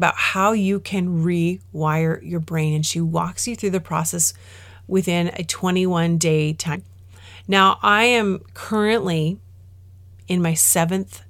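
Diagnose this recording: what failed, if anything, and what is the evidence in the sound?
Codec stage: damaged data in a compressed stream produces a brief glitch at 6.74–6.76 s in the speech, where corrupted frames made the decoder lose sync and resynchronise.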